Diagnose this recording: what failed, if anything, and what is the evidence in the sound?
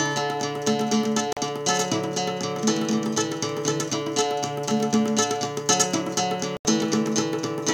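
Two silent gaps, at 1.33–1.37 s and 6.57–6.65 s, with sound resuming as if it had run on: a Bluetooth dropout at playback, likely from late packets discarded.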